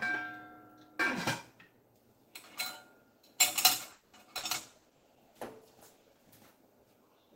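A recording of everyday sounds that runs into a few network problems partway through. First, from 3.91 to 4.16 s the sound stalls and the last bit gets stretched out as a fading buzz or hiss for roughly a quarter of a second, about 220 ms, before picking up exactly where it left off. Nothing is lost, but everything after it lands about 220 ms later. That's most likely a call audio freeze, where packets got held up in transit, the jitter buffer ran dry, and the receiver padded the wait until they turned up. Then there are three bursts of packet loss, at 4.37 to 4.46 s, 4.79 to 4.88 s and 4.97 to 5.06 s. Each time the receiver carries the previous sound forward as a short fading tail for 60 ms, and the audio comes back further along with 60 ms actually gone. Those are real holes, not just delay. Overlapping that stretch, from 4.57 to 6.41 s, there's a call bitrate drop. The bandwidth estimate fell and the encoder went from 32 to 15 kbps, sitting at the low rate for about 1.7 s. 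At that rate Opus codes much more coarsely and trims the top end, so the sound comes out rougher, watery and duller until the rate climbs back.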